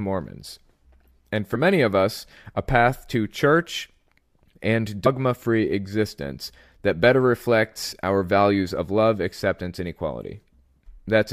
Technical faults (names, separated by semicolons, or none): compressed frames skipped